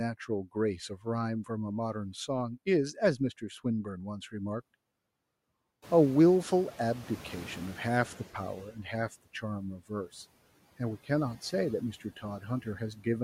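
Noise suppressor artifacts run through the whole clip. The suppressor pulls steady background down by about 17 dB, frame by frame. The residue sinks in pauses and swells under the speech.

At 0.89 to 1.06 s comes the first speech cut by the noise suppressor. It mistakes part of the speech for noise and turns it down by up to about 10 dB. A brief stretch, roughly a tenth of a second, sounds swallowed.

From 5.82 to 8.58 s the noise suppressor is catching up. The room noise jumps by about 19 dB near 6 s. The suppressor's noise estimate lags, so the new noise first passes with less reduction. Over about 2.8 s it adapts and settles to about 11 dB of reduction.

Three more speech cuts follow. At 8.72 to 8.87 s and 12.0 to 12.24 s, short pieces drop by up to about 9 dB. At 12.62 to 13.06 s the drop reaches about 12 dB and lasts a little longer. Each sounds faint or clipped away.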